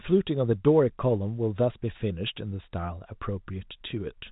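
Nothing stood out on listening to this telephone-band speech, which carries nothing above about 3.8 kHz, as expected for G.711 A-law coding.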